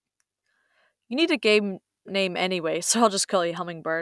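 No technical faults can be heard anywhere in the speech. Nothing in the signal calls for a timestamp or a fix.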